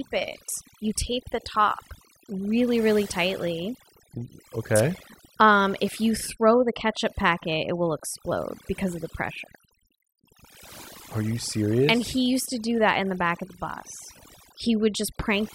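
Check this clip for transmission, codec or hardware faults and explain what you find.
One fault runs through the whole speech clip: overdone noise removal. A noise reduction stage was pushed too hard on a noisy source, so it cuts individual frequency bands deep whenever they sit close to its noise estimate, and the softer parts of the voice fall below that line along with the noise. The background drops and breaks up into twinkling, chirpy specks.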